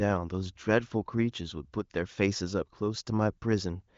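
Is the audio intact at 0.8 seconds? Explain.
Yes, the speech is intact at 0.8 seconds, with no audible fault at that moment.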